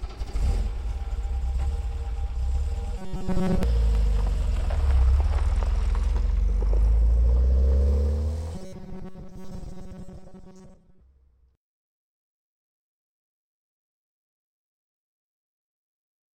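Robotic sound from repeated short buffers appears at 2.98 to 3.63 s and again at 8.55 to 11.01 s: a rigid metallic buzz at 188 Hz. This is likely from about 5.3 ms chunks replayed in place of missing audio, with most of each stretch being repeats.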